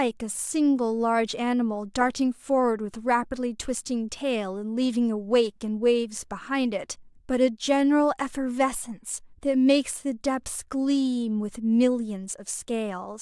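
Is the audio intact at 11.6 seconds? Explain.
Yes, the speech at 11.6 seconds is intact, with no audible fault at that moment.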